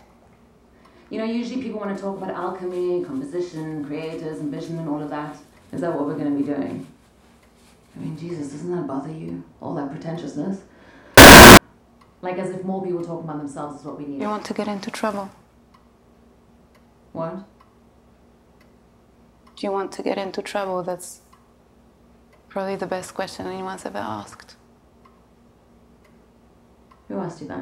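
At 11.18 s the sound suddenly turns into a blast of loud, harsh buzz that runs for about 0.4 s, until 11.57 s. That's a float read as integer fault, likely from 32-bit float samples being read as 32-bit integers. The sign and exponent bits end up setting each value, so the waveform squares off at an almost fixed, high level. Quiet background material jumps up to the same level as everything else, though the pitch still comes through.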